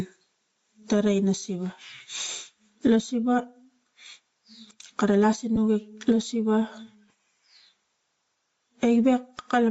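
From the start, the speech swells and sinks in level. The gain swings by about 20 dB. This is gain pumping. The likely cause is gain set far too high, with a fast limiter pulling it back down.

Throughout, the speech also has a breathy, grainy edge, and the upper band sounds hollow and noise-filled. This is Bluetooth LC3 compression, and the damage is plainly audible. Upper frequencies were likely zeroed and refilled with noise, which fits a bitrate near 32 kbps and 10 ms frames.

At 2.28 s and again at 5.56 s there is a brief noisy smear. Each is a lost LE Audio frame, about 10 ms long. The decoder reused the previous spectrum with scrambled signs, so the sound blurs into noise for a moment.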